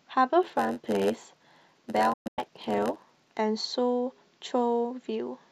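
From 0.42 to 3.39 s the speech carries a steady 91.9 Hz buzz and runs at 0.919 speed while keeping its timbre. This is a block size mismatch (padded): each short block is topped up with zeros, so gaps repeat at the block rate.

From 2.13 to 2.39 s a digital broadcast dropout mutes the audio in scattered holes totalling 216 ms, the longest 120 ms, with 8 ms fades. That fits roughly nine failed frames. Unlike concealed packet loss, nothing fills the gaps; the sound is simply gone.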